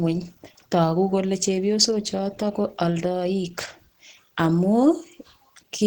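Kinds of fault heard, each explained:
Opus compression: hoarse, muffled roughness across the speech, likely from low-rate hybrid coding near 16 kbps; grainy noise fill rather than MP3's swirling holes.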